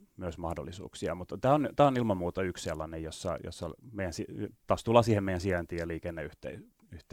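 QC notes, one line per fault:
No faults found in this speech clip; nothing to log.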